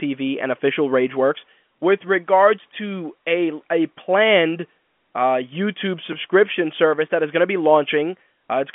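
No technical faults occur anywhere in this speech, which is carried over an ordinary G.711 telephone line with nothing above about 3.7 kHz.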